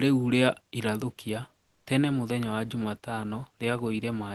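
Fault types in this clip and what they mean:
Comfort noise in place of the background: The sender likely stopped transmitting during a pause, and the receiver filled the gap with synthetic noise. From 1.63 to 1.85 s, between "ria irathũkia" and "tene mũthenya wa", the faint real background becomes steady, featureless hiss about 1 dB quieter.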